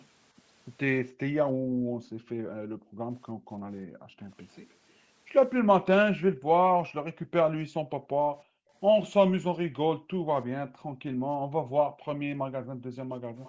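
From 1.53 to 4.21 s the room tone behind the speech sinks and hollows out for around two seconds in total, falling by as much as about 18 dB. This is background gated by the echo canceller: while far-end audio was playing through the loudspeaker, the canceller clamped the microphone, taking the ambience down with it until it released.

Between 2.03 and 2.29 s a faint, delayed ghost of the speech appears, trailing by 311 ms and sitting roughly 35 dB under the main signal. This is an echo leak, likely the canceller failing to fully subtract the loudspeaker sound picked up by the microphone.

The gating returns more severely from 6.24 to 8.72 s and from 9.96 to 13.0 s, with drops of about 40 dB that briefly leave near-silence behind the speech, about a second and a half and two seconds of it respectively.

At 13.37 s, right at the end, a second echo leak surfaces, 338 ms late and roughly 30 dB below the speech. 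Throughout, the call's microphone processing leaves nothing above 8 kHz.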